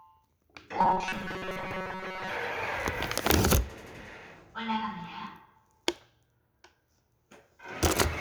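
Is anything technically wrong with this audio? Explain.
Yes. From 0.79 to 2.31 s there's a robotic sound, likely from repeated short buffers: about 5 ms chunks looping over most of the audio, forcing a rigid 188 Hz metallic buzz.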